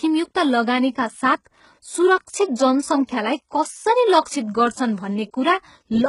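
Throughout the speech the treble sounds rebuilt rather than recorded, which is heavy damage that most likely comes from HE-AAC compression, and the sound points to HE-AAC v2 at around 12 kbps. The encoder kept only the lower spectrum and filled in the upper bands by copying lower content upward under a coarse envelope. Nothing sits above 11.1 kHz. The synthetic highs carry harmonics that don't line up with those below the crossover, so sibilants come out gritty or lispy. Plain low-bitrate AAC would instead lose the treble outright.

From 3.22 to 5.40 s, Wi-Fi interference adds a steady tick repeating every 102.4 ms, about ten times a second, sitting roughly 45 dB under the speech. A nearby radio's beacon bursts were picked up and rectified by the audio circuitry, turning each transmission into a click. Its strict clock-like regularity separates it from random crackle or mains hum.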